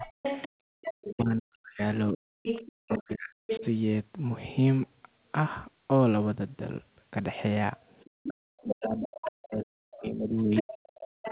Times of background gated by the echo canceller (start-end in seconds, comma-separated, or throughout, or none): 0.48-0.68